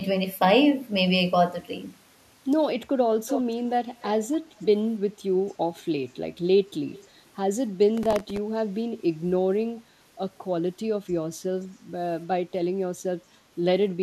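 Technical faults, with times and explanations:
3.27–3.42 s, 4.01–4.07 s, 4.60–4.65 s and 6.93–7.08 s, echo leak: brief, faint copies of the speech return about 295 ms late, at about 10 dB below the speech at first and then about 20 to 25 dB down. This is likely a far-end loudspeaker's sound that its echo canceller failed to remove.
7.98–8.37 s, processor overload crackle: a gritty tearing burst rides on the speech for about 0.4 s. Some twenty short processing deadlines were missed over that stretch, with buffers of around 1.5 ms. Each miss repeated stale audio with hard edges.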